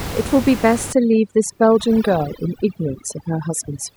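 From 0.93 s to the end, overdone noise removal leaves twinkling specks; unlike a gate, it mutes single frequency bands, not everything.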